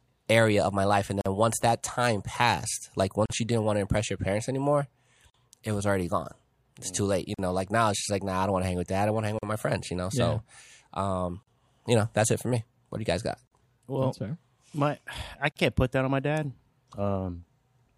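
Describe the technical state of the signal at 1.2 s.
Right around there, from 1.21 to 1.26 s, there's a gap at a join of encoded pieces: an about 46 ms gap cutting into the continuous speech, with its edges smeared by the codec so the silent part is shorter, and then the sound picks up right where it left off. It comes from separately encoded segments stitched together untrimmed, so each encoder's start-up delay and last-frame padding stay in. The pattern recurs every 2 s.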